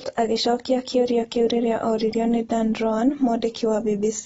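AAC compression runs throughout. The speech sounds dull and smeared, with fizzy sibilants and warble. A spectrogram shows nothing above 7.6 kHz. That is likely a low-bitrate AAC-LC encode.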